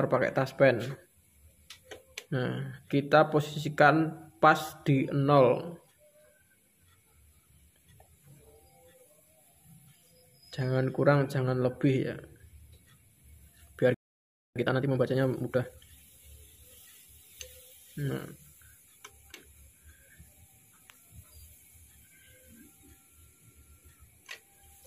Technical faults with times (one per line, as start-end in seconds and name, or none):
13.94-14.56 playback stall
14.56-15.78 time-compressed catch-up